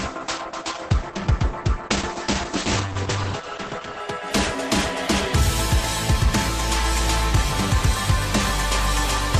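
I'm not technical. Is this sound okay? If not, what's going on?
No. For the first 4 seconds the sound is dull: nothing above about 8.7 kHz gets through, so the crisp top end is missing and compression artefacts are stronger. At 4.0 s the quality jumps up with no break. This is an adaptive stream starting at a low bitrate: the player began with a cheap, small version so playback could start quickly, then switched to a better one once it had measured the connection.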